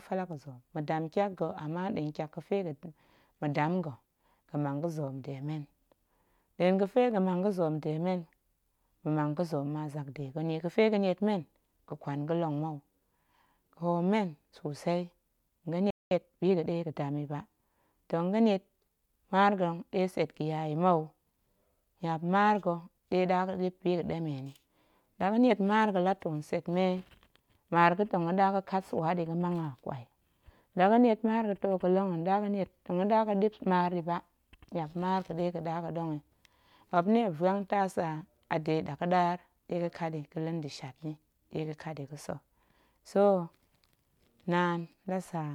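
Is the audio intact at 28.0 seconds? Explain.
Yes, the audio is intact at 28.0 seconds, with no audible fault at that moment.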